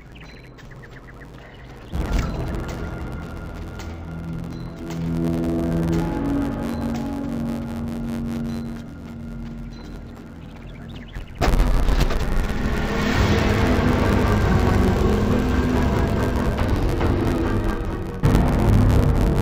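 Throughout the clip, interleaved audio is read as planar: each 10.88 ms block of alternating left and right samples is split into halves and played as two channels at half speed. With blocks this short, the sound turns dull and robotic, buzzing at about 92 Hz with no clear octave drop.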